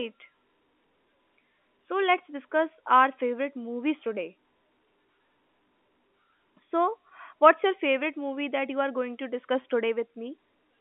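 At 9.62 to 9.64 s, right after "you are going to", packet loss with pitch repetition fills a 20 ms gap (fitting one lost packet) by repeating the last pitch period, making a brief buzzy hold. The waveform shows identical repeated cycles, and the spectrogram shows frozen, evenly spaced harmonics.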